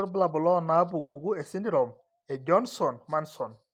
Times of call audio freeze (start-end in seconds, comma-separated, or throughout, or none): 0.99-1.23